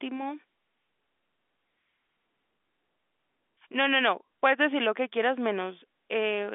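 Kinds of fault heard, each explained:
Nothing to flag here: the speech simply comes down an ordinary telephone line using G.711 coding, so it sits in the usual narrow band of roughly 200 Hz to 3.5 kHz with nothing above about 3.7 kHz, and that's just how phone audio is meant to sound.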